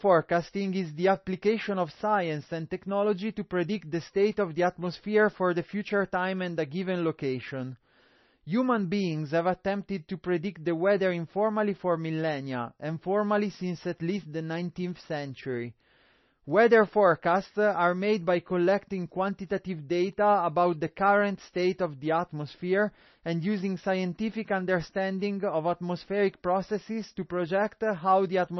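From start to finish the speech has a hard ceiling at 5.9 kHz, with watery, swirly artefacts, metallic chirps on s sounds and smeared attacks. That's likely heavy MP3 compression at a very low bitrate, around 25 kbps, where the encoder drops the treble and lets weak frequency lines flicker.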